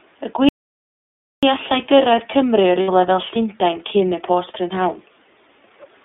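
Across the whole clip the speech sounds thin and boxed-in, with a plainly audible rough, slightly synthetic edge. Nothing reaches below about 300 Hz or above about 3.6 kHz. This is the iLBC codec, a narrowband VoIP coder that models each frame's excitation independently. The texture points to its 30 ms frame mode at around 13.33 kbps. The narrow line band removes the low body and the upper brightness.

From 0.49 s to 1.43 s the sound cuts off abruptly and leaves dead, total silence for about 940 ms, with no room tone at all, before resuming mid-flow. This is an audio dropout to silence. The input was likely lost for a moment, and the recorder kept writing silence, so whatever occurred in that stretch is gone.

From 2.82 s to 2.89 s, about 60 ms, the speech briefly turns into a held, faintly buzzy vowel-like smear. Then it snaps back to normal almost immediately. These are lost iLBC frames, and the length fits two missing 30 ms frames. 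The decoder covered the gap by repeating the last pitch cycle with added noise. Because each iLBC frame stands alone, recovery is nearly instant.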